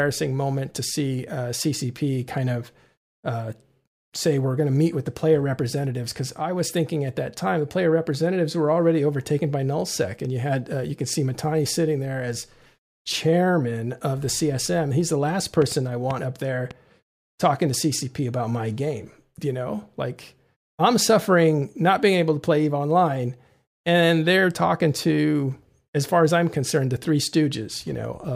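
Right after "the last", from 15.62 to 16.72 s, there's a short train of clicks, around four same-shaped pops at an uneven pace of about 2.8 per second, poking out roughly 10 dB above the speech. It's likely interference from nearby gear or a faulty connection or power supply.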